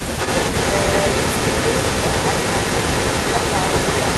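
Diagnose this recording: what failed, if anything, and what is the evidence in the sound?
Call processing: from 0.0 to 4.18 s the speech recurs 267 ms later at near-equal level, an echo leak likely passed by a far-end canceller; spectrograms show delayed copies of speech bursts.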